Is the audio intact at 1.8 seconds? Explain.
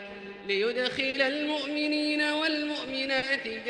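No. The sender's audio clock runs slower than the receiver's, by roughly 3 percent, so the receiver keeps running short of material. This clock drift between sender and receiver lasts through the whole clip, not just this moment. Because the incoming stream falls steadily behind the playback clock, the timing at 1.8 s has already been pulled away from the original.

At 1.8 s the audio sits inside a stretch of repeated timing corrections running from 0.08 to 3.15 s. The receiver keeps repeating small pieces of the signal to fill the gap left by the slow sender, adding around 50 ms over the span. The net effect is playback at 99 percent speed. The corrections are slight and unevenly spaced, so they come across as faint hiccups and a gently unsteady tempo rather than clear breaks.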